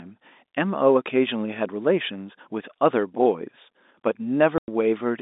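At 4.58 s the speech cuts out for 100 ms, until 4.68 s: packet loss filled with silence. Missing packets were replaced with zeros, and the gap fits five 20 ms packets. Both edges are hard. The waveform goes flat, and the spectrogram shows an empty vertical strip.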